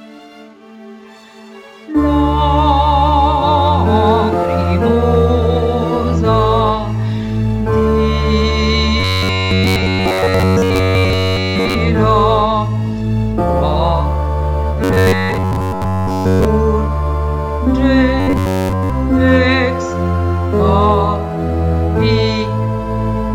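From 9.00 to 11.75 s, 14.84 to 16.45 s and 18.20 to 18.90 s the sound becomes a rigid 93.8 Hz buzz. This is robotic sound from repeated short buffers, likely from a roughly 10.7 ms chunk looping while the real audio is skipped. Unlike a pitch shift, the buzz stays fixed.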